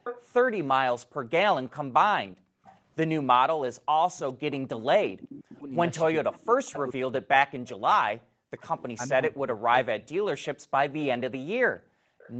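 From 0.04 to 2.78 s there is an echo leak. A copy of the speech trails 419 ms behind at about 10 dB down, likely loudspeaker pickup the echo canceller failed to remove. On a spectrogram it appears as faint duplicated harmonics shifted later in time.

Between 1.01 and 2.64 s the background is gated by the echo canceller. The room sound drops by up to about 40 dB for roughly half a second in total, which shows as gaps in the noise floor.

From 4.04 to 10.28 s speech is suppressed in double talk. The canceller likely turned the talker down along with the echo, so the voice dips by as much as about 40 dB or breaks up for around three seconds in total. The waveform envelope shows this as notches.

A fainter echo leak sits inside that stretch, from 5.58 to 8.68 s. It arrives 434 ms late at about 25 dB down, likely residual echo, and appears as a weak trailing copy on the spectrogram.

The background is gated again from 10.58 to 12.19 s, with the same drops of up to about 40 dB, roughly half a second in total.

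A last faint echo, 448 ms late and about 30 dB down, likely leaked through the canceller at 12.19 to 12.31 s.

Across the clip, nothing appears above 8 kHz on the spectrogram, which comes from the Opus call path.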